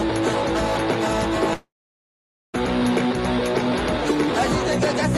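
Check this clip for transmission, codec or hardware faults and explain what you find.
Two transmission faults are audible, both from the network path.

From 1.53 to 2.58 s there is what sounds like a long network dropout. Packets most likely stopped arriving, so the receiver stretched the last audio into a fading buzz or hiss, then roughly 850 ms of near-silence. When the signal resumes, about 820 ms of audio is simply missing.

From 2.83 to 3.16 s a jitter buffer speed-up follows. With a backlog of late audio, the receiver trimmed brief pitch-period slices repeatedly, about 50 ms in total, to catch up. Playback runs at about 112% speed with pitch unchanged, giving a hurried feel.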